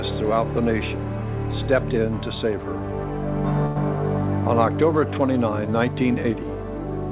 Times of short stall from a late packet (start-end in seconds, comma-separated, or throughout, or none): 3.66-3.78